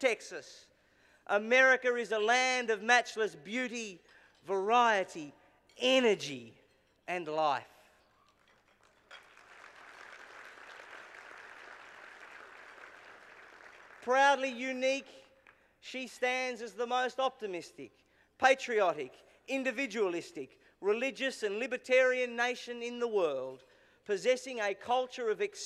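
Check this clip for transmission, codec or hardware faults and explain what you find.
Nothing audible points to a transmission, codec or hardware problem anywhere in the clip.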